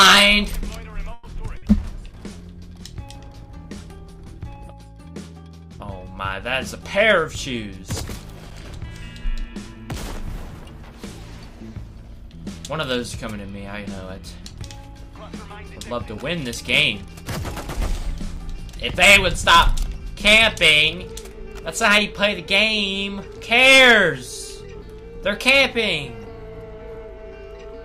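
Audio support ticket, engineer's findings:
Call audio freeze at 1.13–1.25 s: last sound continued about 100 ms as a fading buzz, then audio resumes where it stopped, with nothing lost. Likely held-up packets draining the jitter buffer. Spectrogram shows a smeared, decaying band bridging the hole.

Short stall from a late packet at 1.57–1.64 s: a sound stretched about 50 ms with slight buzz or dip while the receiver waited for the missing packet. Waveform shows a repeated, slightly sagging cycle pattern before normal variation returns.

Jitter buffer speed-up at 12.23–13.05 s (110% speed, roughly a tenth of a second trimmed) and 15.35–15.91 s (109%, around 50 ms). Hurried delivery at unchanged pitch. Backlog cleared by cutting pitch-period slices. Waveform shows unchanged period length; spectrogram shows unchanged harmonic spacing.

Gap between chunks at 18.37 s: hard-edged hole of about 7 ms, no content missing, which fits audio sent in 10-second chunks with a late-starting player or codec padding. 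Waveform shows a flat silent run with abrupt edges; spectrogram shows a thin vertical blank stripe.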